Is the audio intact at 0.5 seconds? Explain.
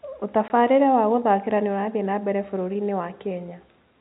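No. At 0.48 to 0.50 s, just before "wa gũthakĩra nĩ ũrathiĩ", there is packet loss filled with silence: a 20 ms stretch, fitting a single lost packet, was replaced by silence, leaving a hard-edged gap.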